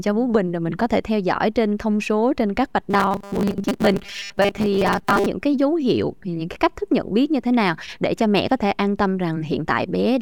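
From 2.9 to 5.27 s, new audio likely arrived too seldom, so the playback side kept filling the gaps by replaying its last short chunk while the real audio went missing, about half of what was heard in that span. The repeat rate of 200 Hz points to a buffer of about 5 ms. This is robotic sound from repeated short buffers. The speech turns into a hard, metallic buzz locked at 200 Hz that only loosely tracks the talking.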